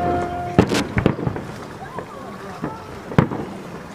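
From 0.59 to 0.80 s, a burst of cable scratch noise cuts across the sound. It is dense and uneven, a rough rustle sitting only a little below the sound itself. A worn cable or connector being moved is the likely cause.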